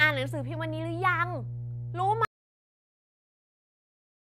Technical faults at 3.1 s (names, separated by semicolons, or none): mains hum; audio dropout to silence